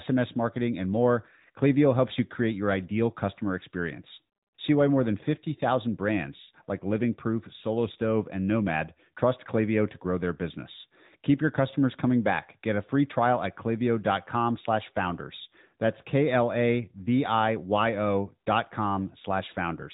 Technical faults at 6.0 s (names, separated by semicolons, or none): AMR narrowband mobile codec